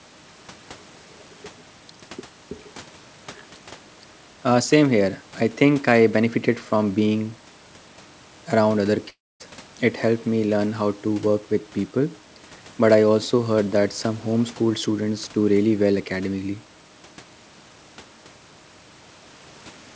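It's a speech recording over a call, with nothing above 8 kHz, which fits a wideband codec like G.722. At 9.10 s the audio cuts out until about 9.42 s. The last bit of sound smears on as a fading buzz before roughly a quarter second of near silence, and when it picks up again about 0.3 s of material is simply gone. That's the signature of a long network dropout, with the receiver's concealment filling the gap as best it could, likely packets lost in transit.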